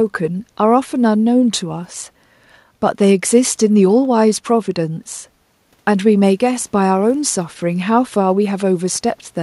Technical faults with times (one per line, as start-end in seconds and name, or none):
none